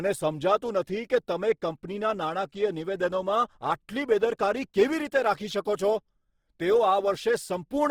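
Throughout, Opus compression, likely from CELT mode at a rate around 16 kbps, fills starved bands with noise, making the speech sound rough and grainy.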